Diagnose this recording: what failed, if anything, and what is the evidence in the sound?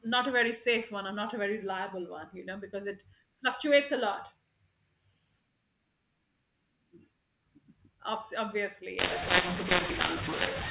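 From 8.99 s to the end, speech turns harsh and pauses fill with hiss: a codec-stage mu-law and A-law mix-up, with mu-law bytes decoded as A-law.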